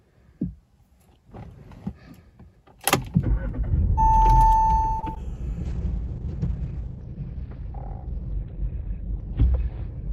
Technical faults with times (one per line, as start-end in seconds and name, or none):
4.99-5.04 short stall from a late packet
5.15-5.17 short concealed packet loss
5.66-10.13 call bitrate drop